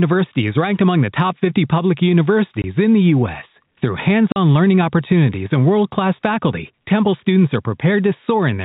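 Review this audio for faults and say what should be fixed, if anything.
There's packet loss filled with silence at 2.62–2.64 s (20 ms) and again at 4.32–4.36 s (40 ms). The speech just drops out with hard edges, which fits losing one 20 ms packet, then two back to back, with the receiver playing silence instead of concealing the gap. The 4 kHz ceiling you hear is just the G.711 telephone coding. To prevent this, turn on packet loss concealment and give the jitter buffer enough headroom to ride out short losses.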